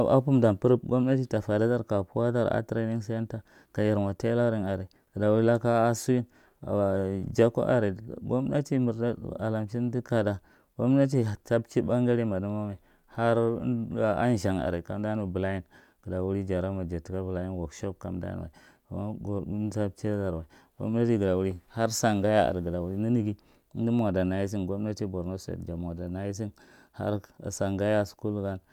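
No technical faults can be heard anywhere in the speech recording. Nothing in it calls for a timestamp or any further comment.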